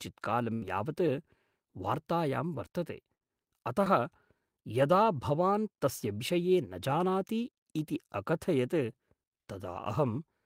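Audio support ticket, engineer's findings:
Held buzz or hiss fading out, then speech resumes with a chunk missing, at 0.53–0.63 s (about 80 ms gone) and 3.15–3.23 s after "वार्तायां वर्तते" (about 60 ms gone). Burst of packet loss: the receiver stretched and faded the last sound.

Brief smear at 3.85–3.88 s. Short concealed packet loss: about 20 ms never reached the decoder, and the gap was filled from the preceding sound before blending back.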